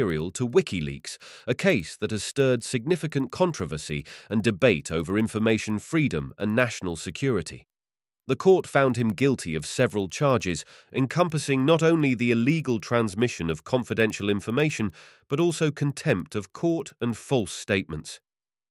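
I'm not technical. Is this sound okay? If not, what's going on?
No. A faint, steady ticking runs through the whole clip, ten ticks a second, and only while someone is talking. This is a resampler restarted on every block. The speech was converted in separate 100 ms chunks, likely from 24 kHz to 48 kHz, leaving a tiny glitch at each join.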